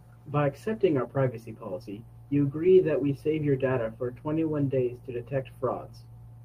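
Clock drift between sender and receiver runs through the whole speech clip: the sender's clock is about 4 percent fast, so the receiver's jitter buffer keeps overfilling. Repeated timing corrections follow from 0.11 s to 6.39 s, where the receiver trims short pieces to keep pace with the 104 percent rate, in small, unevenly spaced edits.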